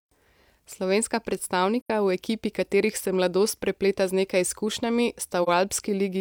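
AAC frame loss with muting: the decoder lost audio frames and zeroed their spectrum, so the speech fades into a soft-edged hole at 1.81–1.90 s, before "v ekipi katerih se", and dips briefly at 5.43–5.48 s, after "prepleta z nekaj izkušnjami".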